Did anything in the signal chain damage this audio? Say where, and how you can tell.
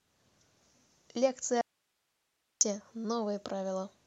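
Yes. The speech cuts out abruptly at 1.61 s and returns at 2.61 s, leaving a full second of bare hiss around 50 dB below the signal. This audio dropout to a faint residue likely comes from a momentary break in the analogue wiring while the input stayed live.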